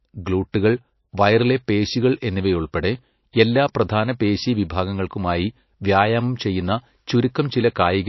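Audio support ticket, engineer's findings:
MP3 compression, throughout: watery, swirly speech with metallic edges on s sounds. Spectrogram shows a hard ceiling at 5.8 kHz and flickering holes in the weaker bands. Likely a starved encoder, consistent with a bitrate near 29 kbps.

Pre-echo at 0.52 s: hiss running about 19 ms ahead of a sharp attack, which lands soft and smeared. On the waveform, low noise before the onset; on the spectrogram, a smudge leading the transient. The encoder spread block-wide quantisation noise into the quiet gap.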